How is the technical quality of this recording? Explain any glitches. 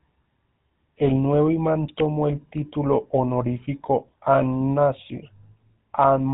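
The technical quality is poor: the speech has passed through a low-bitrate telephone codec. Throughout, GSM full-rate coding, consistent with 13 kbps, cuts everything above 3.8 kHz and excites a vocal-tract model with sparse regular pulses, leaving plainly audible buzzy, gravelly roughness.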